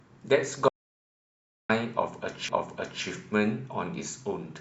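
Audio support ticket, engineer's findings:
Audio dropout to silence, 0.68 to 1.70 s. Input path likely lost, with the recorder writing silence meanwhile. Speech cuts off mid-flow, then about 1.01 s of dead digital silence with no room tone, and that stretch of speech is gone.

Repeated frames, 2.49 to 3.04 s. A block of compressed frames was written twice; the 0.56 s span fits a run of about six frames. The decoder replays that 0.56 s once, heard as a stutter. Clip runs 0.56 s longer.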